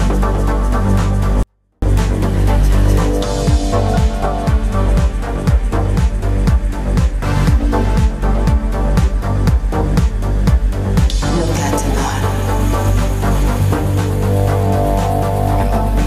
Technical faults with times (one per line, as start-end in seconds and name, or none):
1.43-1.82 24-bit alignment error (too quiet)